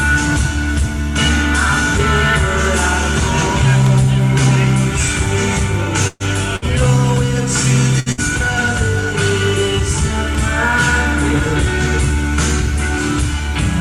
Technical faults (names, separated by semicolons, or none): burst of packet loss